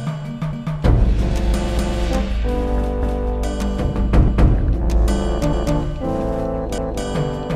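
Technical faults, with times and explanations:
0.53, 1.78, 3.03, 4.28, 5.53 and 6.78 s, overlapping chunks: each 1 s chunk starts 250 ms before the previous one ended, so a quarter-second slice plays twice at every join. That gives a regular stutter, a repeat landing every 1.25 s.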